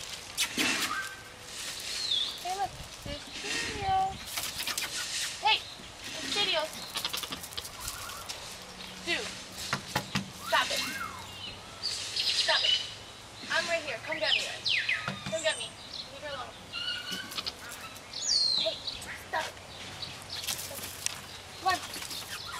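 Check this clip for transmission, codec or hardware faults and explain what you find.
No faults found.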